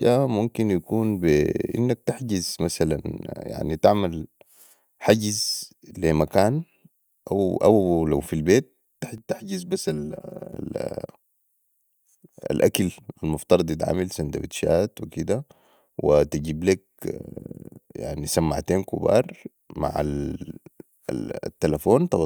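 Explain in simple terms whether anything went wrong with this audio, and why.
Something does go wrong, between 9.18 and 10.53 s, just after "او لوفي البيت". The speech turns hollow and phasey there. This is channel delay (comb filtering). One channel arrives about 5 milliseconds late, and when the two are combined into one, parts of the sound cancel at evenly spaced pitches, starting around 100 Hz. That removes slices of the tone and leaves the voice thin and tube-like for that stretch.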